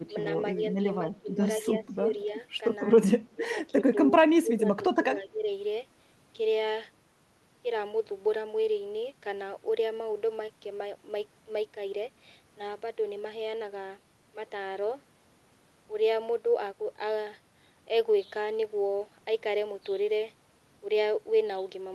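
Speech, where the voice ducks in five short patches, at 1.08 to 1.39, 1.6 to 2.12, 3.34 to 3.95, 4.42 to 4.85 and 5.15 to 5.48 s, sinking roughly 10 to 15 dB. That's speech suppressed in double talk, likely the echo canceller mistaking the talker for loudspeaker echo and pulling the level down while both sides talked.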